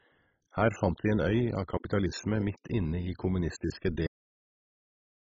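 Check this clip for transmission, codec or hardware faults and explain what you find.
Two faults are present: heavy low-rate compression throughout, and an abrupt cut-off near the end.

Throughout, the speech sounds dull and gurgling, with a granular roughness, and the upper frequencies are missing. This is likely MP2 compression at a very low bitrate, around 16 kbps. Starved of bits, the coder shuts off its upper sub-bands and coarsely quantises the rest. A spectrogram would show a hard ceiling where the upper bands are switched off, with patchy, flickering blocks below it.

At 4.07 s, right after "midt inne i kommunistiske", the audio is cut off mid-sound and drops straight to digital silence with no decay. The final buffers never played. On the waveform it looks like a sudden vertical stop followed by a flat line to the end.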